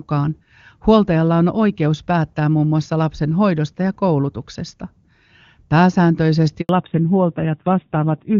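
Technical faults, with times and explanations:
6.61 to 6.69 s, handover gap: during a network switch no speech frames arrive for 80 ms. The sound fades within tens of milliseconds and stays silent until the new link starts. The waveform shows a brief flat stretch, and the spectrogram a narrow blank vertical band.
6.69 s to the end, fallback to narrowband: the call drops from HD Voice to an older narrowband codec. Before this point the wideband sound is clean, which fits a high AMR-WB rate. Nothing above 4 kHz passes now, so the speech turns duller and rougher, as a low rate such as 7.4 kbit/s would. The spectrogram's upper band cuts off sharply at 4 kHz from 6.69 s.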